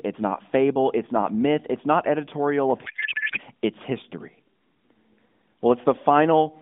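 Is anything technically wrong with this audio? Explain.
Yes. From 2.86 to 3.40 s, just after "myth it's not editorial", there is a codec payload misread. The AMR bits are being unpacked from the wrong positions, likely because octet-aligned frames are being read as bandwidth-efficient. This turns the speech into garbled warble that isn't silence or a gap, as packet loss would be.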